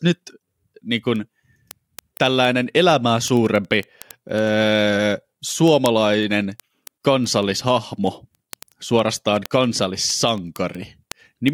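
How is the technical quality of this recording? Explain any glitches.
The recording is compromised by one persistent fault. Word clock ticks run from 0.14 to 11.48 s: sharp, regular clicks about ten times a second. An unsynchronised receiver slips one sample each time, which points to a clock mismatch of around 200 ppm.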